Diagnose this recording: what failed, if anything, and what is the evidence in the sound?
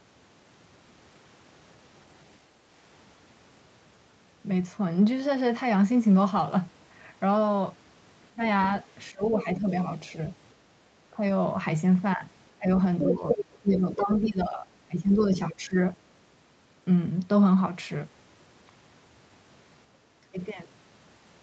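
Speech suppressed in double talk, call processing: the speech dips by up to about 25 dB at 8.31–9.68, 11.13–11.21, 12.58–15.76 and 20.23–20.38 s, likely the echo canceller ducking during overlap rather than network dropouts.

Other side's voice leaking through, same stage: a second voice sits under the speech at 8.62–9.85, 12.99–14.11 and 15.18–15.39 s, from about 20 to 5 dB down, likely residual echo rather than crosstalk.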